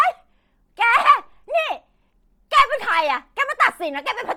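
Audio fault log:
throughout: Bluetooth LC3 compression. The speech was likely squeezed through an LE Audio link at a low rate, around 32 kbps with 10 ms frames, so the codec discards upper spectrum and refills it with noise, leaving a heavy, breathy, grainy edge on the speech.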